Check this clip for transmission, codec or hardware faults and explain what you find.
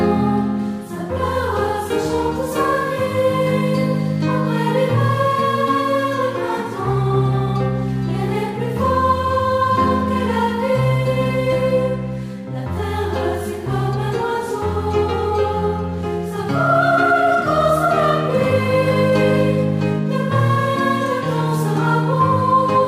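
No transmission, codec or hardware faults turn up anywhere in this clip.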